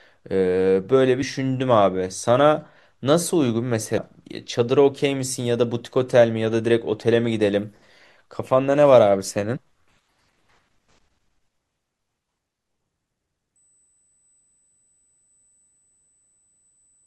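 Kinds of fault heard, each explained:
Damaged data in a compressed stream: at 1.22 s and 3.97 s, corrupted bytes in the coded speech make the decoder misread a frame and lose sync while it hunts for the next frame header, leaving a very short blip, under 20 ms each time.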